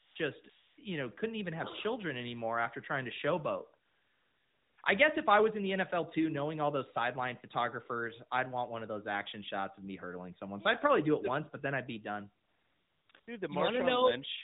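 AMR comfort noise fills the pauses at 0 to 0.16 s, 0.50 to 0.78 s, 3.86 to 4.78 s, 4.82 s, 12.44 to 13.10 s, 13.12 s and 13.20 to 13.28 s. The phone judged these gaps silent, stopped sending speech frames, and the receiver substituted smooth synthetic hiss built from a rough level and spectrum estimate. Unlike a noise gate, which drops to true silence, the background here turns into a steady, even wash that switches in and out. The narrowband speech between these gaps carries only light coding damage, which fits the 12.2 kbps AMR-NB mode.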